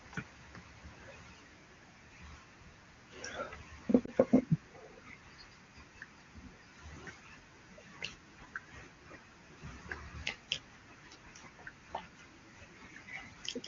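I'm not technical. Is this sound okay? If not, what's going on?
No. Around 4.06 to 4.11 seconds the speech briefly dips or warbles. That's a lost AMR speech frame: one 20 ms chunk was corrupted over the radio link, so the HD Voice decoder filled the gap by quietly repeating what came before.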